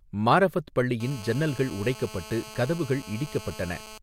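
From 1.00 s to 3.98 s a GSM phone buzz runs under the speech: a hard, raspy drone at about 217 Hz, steady throughout and sitting about 17 dB below the speech. A nearby 2G handset on a call is pulsing its transmitter 217 times a second, and the audio circuitry rectifies those radio bursts into sound. On a spectrogram it shows as a comb of evenly spaced horizontal harmonic lines; the waveform carries a regular train of sharp pulses.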